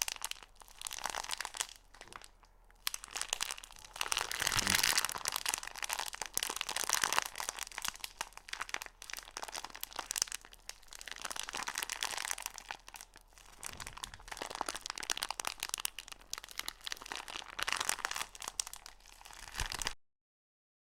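At 19.93 s the audio hits a cut-off end: the sound stops mid-event and drops straight into digital silence for the last second or so, with no decay at all. The final buffers never got written out, so the tail simply vanishes.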